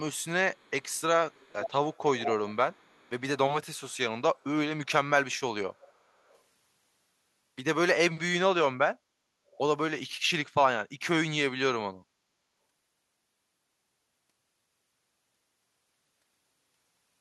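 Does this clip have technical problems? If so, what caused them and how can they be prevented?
Yes. There is echo leak. A delayed copy of the speech comes back 469 ms late. It is strongest from 0.14 to 3.21 s, about 15 dB below the speech. Much fainter scraps follow at 5.74–5.93 s, 6.27–6.39 s and 9.51–9.58 s. The likely cause is a loudspeaker at one end whose echo canceller let part of the microphone pickup through. Using a headset at that end, or an echo canceller that fully handles a 469 ms delay, would prevent it.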